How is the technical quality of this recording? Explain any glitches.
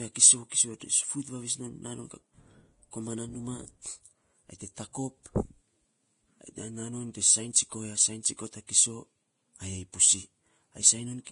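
The technical quality is poor. Heavy lossy coding affects the whole speech clip, and several attacks are smeared.

Throughout, the sound is hissy and grainy, and nothing is present above 10.5 kHz. This is likely Vorbis compression at a low setting, which fits a bitrate around 30 kbps. Treble detail is quantised so coarsely that it turns into noise.

Pre-echo occurs at 0.49 to 0.52 s, 4.93 s, 8.23 s and 8.67 to 8.69 s. Each time, a brief hiss of 14 to 23 ms comes just before an attack. The codec spreads the attack's quantisation noise across the quiet moment preceding it, so the onset sounds smeared.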